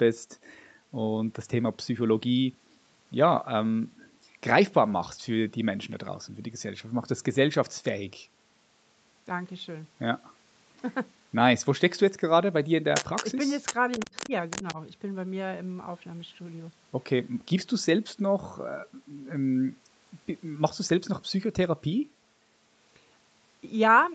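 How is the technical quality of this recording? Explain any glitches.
The recording has two related faults, bunched between about 12.9 and 14.8 s, both most likely from the device's echo canceller struggling while both sides talked at once. The call path audibly limits the band, with nothing above 8 kHz, consistent with Opus at around 32 kbps.

Other side's voice leaking through, at 12.95–13.24 s, 13.65–13.74 s, 13.91–14.29 s and 14.5–14.75 s: the far end's audio played on the loudspeaker was picked up by the microphone, and the echo canceller likely failed to subtract all of it. A second voice surfaces in short scraps, quite strong in the first two bursts at only around 5 dB under the main talker, then fainter, roughly 15 dB down, in the last two.

Speech suppressed in double talk, at 14.06–14.32 s and 14.63–14.78 s: with both sides active, the echo canceller likely could not tell the local talker from the returning echo and pulled down the whole signal. 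The talker's level sags in brief patches, about a tenth of a second in total in the first case with a drop of roughly 15 dB at its deepest, and a shallower dip of about 5 dB over roughly 50 ms in the second, overlapping the leaked voice.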